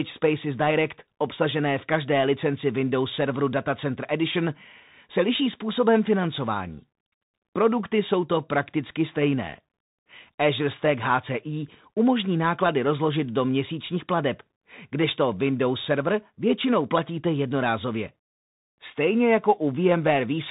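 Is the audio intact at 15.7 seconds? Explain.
No. At 15.7 seconds the speech is passing through a Bluetooth CVSD headset codec, and that damage runs through the whole clip rather than just this moment. CVSD codes one bit per sample, stepping the waveform up or down with an adaptive step size, which fits a 64 kbps headset link. Nothing above about 3.8 kHz survives, so the speech sounds narrowband. S sounds turn scratchy, and a granular hiss sits under the speech.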